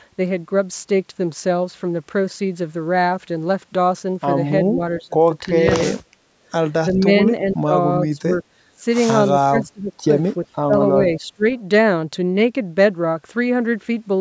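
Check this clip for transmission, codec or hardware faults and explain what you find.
The speech has one recurring fault, speech suppressed in double talk, at 4.65–5.14, 5.47–5.70, 6.92–7.73, 8.15–8.30, 8.76–8.83, 9.49–9.92 and 10.45–11.45 s. The voice level dips in short chunks, from a mild drop of about 5 dB near 5.5 s to about 25 dB in the final stretch. The likely cause is an echo canceller that, with both ends talking at once, could not separate the near talker from loudspeaker echo and attenuated both.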